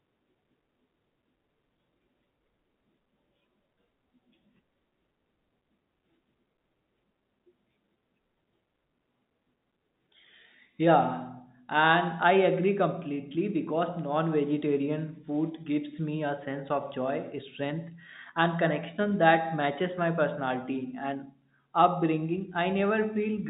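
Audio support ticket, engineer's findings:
No faults found; telephone-band audio, nothing above 3.8 kHz.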